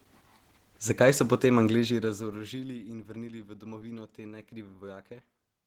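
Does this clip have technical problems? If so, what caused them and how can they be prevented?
Yes. Opus voice compression runs through the whole clip: the speech sounds hoarse and slightly robotic. That points to around 16 kbps hybrid mode, where SILK codes below 8 kHz and CELT above. Unlike a plain low-pass, the top isn't cut off. Prevent it by encoding at a higher bitrate.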